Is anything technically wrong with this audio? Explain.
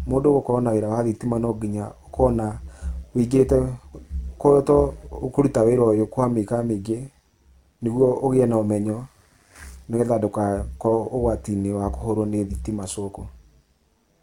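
Yes. Overlap-add ripple runs through the whole clip. The speech was split into windowed frames and rebuilt with an overlap whose windows don't sum to a constant gain, so the level dips and recovers once per frame, by about 6 dB, at a rate of around 100 times a second. That periodic swell gives the voice a metallic buzz, with extra tones laid over every syllable rather than a smooth, steady tone.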